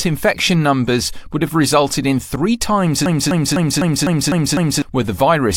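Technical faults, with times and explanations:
3.06–4.82 s, broken-record loop: after "resulted in three times" a 0.25 s fragment repeats identically seven times. Unlike echo, nothing decays, and the audio that belonged there is gone, likely from a stalled stream.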